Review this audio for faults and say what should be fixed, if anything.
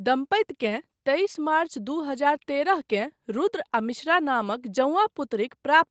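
Nothing to fix: the speech shows no faults, and its top end stopping near 8 kHz is the normal band limit of the call path.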